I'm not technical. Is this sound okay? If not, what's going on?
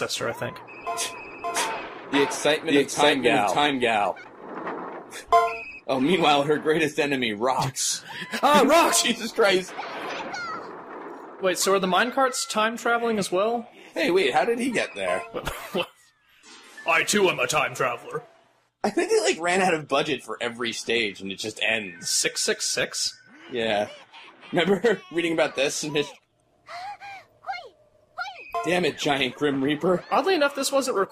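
No. From the very start until 4.24 s there's a doubled audio track: a second, equally loud copy trails about half a second behind, then stops abruptly. Unlike a room echo, it doesn't fade or sound roomy. The likely cause is a second recording path or an editing overlap.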